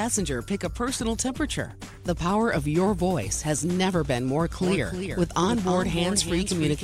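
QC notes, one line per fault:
4.61 s to end: doubled audio track. A full-band second copy of the sound enters abruptly, trailing roughly a third of a second behind and about 10 dB quieter, likely from a second, slower capture path. Unlike echo or reverb, it has no decay tail or room colouring.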